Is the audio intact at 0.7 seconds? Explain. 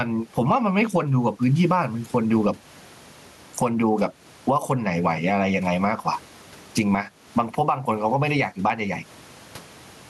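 No. Gain pumping runs through the whole clip, so it is present at 0.7 s. The likely cause is an input gain set far too high, with a fast limiter clamping down on every loud syllable. The level swings by around 15 dB, and the room noise sits about 38 dB below the speech. Unlike a noise gate, which cuts the background out, this squashes loud and soft parts closer together in level.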